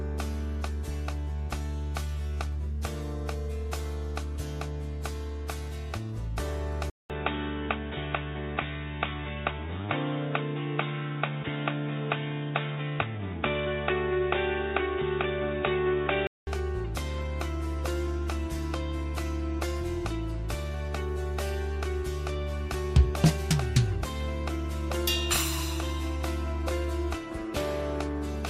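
At 6.90 s there's a 200 ms gap, then everything above 3.8 kHz vanishes and a faint new hiss sits well under the sound at roughly the same level, until 16.47 s. That's likely an input switched to a poorer device, a narrower-band mic, before switching back.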